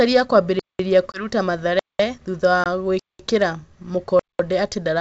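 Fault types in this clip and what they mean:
gap between chunks: The audio arrived in pieces and the playback left silence at each join, so nothing is lost but the speech stops dead. Hard-edged holes of 200 ms fall after each 1-second chunk, at 0.59, 1.79, 2.99 and 4.19 s.
packet loss on an ADPCM call: A stretch of about 20 ms went missing and was filled with silence, which fits a single lost packet. The decoder's predictor and step size then drifted from the sender's, so speech resumes slightly distorted around 1.12 to 1.26 s and 2.64 to 2.66 s.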